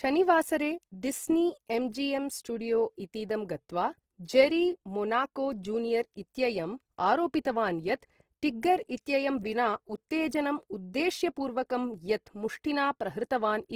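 From start to end, the speech carries audible codec damage. The speech sounds grainy and rough, with a noisy fizz where clean tone should be. The sound is likely Opus compression in its music mode, starved of bits. That encoder keeps each band's energy but fills thin bands with folded or noise content. The roughness fits a bitrate near 16 kbps. Bandwidth stays full, reaching about 20.3 kHz.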